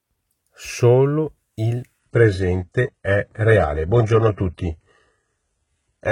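At 1.99 s the speech abruptly drops in quality and stays degraded to the end: an adaptive stream at a lower bitrate. The player switched to a cheaper version of the stream, most plausibly because the connection slowed. There is no gap at the switch. From that point nothing remains above 11.1 kHz, and codec artefacts increase. The step down fits a change from roughly 96 kbit/s AAC to a very low-rate HE-AAC stream near 12 kbit/s.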